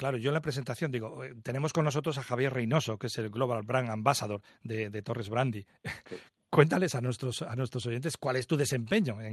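No faults are present: the speech carries only the ordinary coding character of the call path, with its top end limited at 12 kHz.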